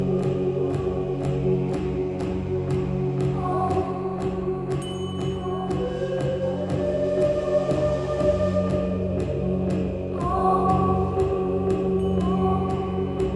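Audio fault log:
No faults heard anywhere in this recording.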